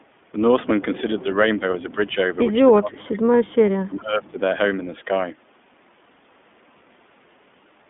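The iLBC codec shapes the whole recording. Each 20 ms frame is coded on its own, which fits the 15.2 kbps mode, and the band runs only from 200 Hz to 3.5 kHz, so the speech sounds audibly rough, buzzy and thin throughout.

Speech is pulled down at 1.47–1.64 s, 1.82–2.16 s, 2.78–3.44 s and 3.88–4.39 s, likely speech suppressed in double talk by an echo canceller. The first two dips are milder, around 5 to 10 dB. The later two go deeper, about 20 to 25 dB.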